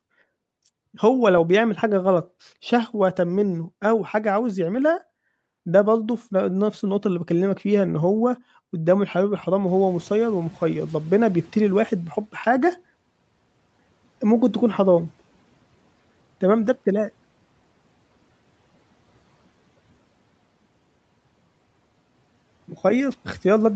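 Just before 9.7 s, the room noise jumps by about 19 dB. The noise suppressor is caught out. Its noise estimate still reflects the quieter room, so from 9.67 s the new noise passes with little reduction. Over about 2.6 s the estimate adapts, and the noise sinks by about 11 dB, settling by 12.3 s. This is the noise suppressor catching up. It is heard as a swell of background noise that gradually fades under the speech.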